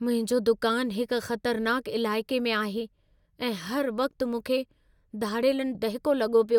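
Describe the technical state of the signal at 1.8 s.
At 1.8 s the speech signal is intact, with no audible fault at that moment.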